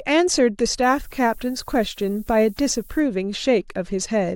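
From 0.83 to 3.00 s, low bit depth with noise shaping, fitting 8-bit rounding pushed upward, adds thin hiss about 25 dB down, brightening the spectrogram's top.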